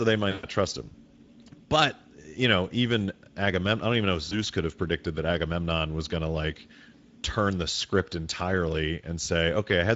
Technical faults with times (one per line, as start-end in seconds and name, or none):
0.00-9.95 Speex codec
0.31-0.46 VoIP packet loss concealed by the speech codec
4.29-4.34 VoIP packet loss concealed by the speech codec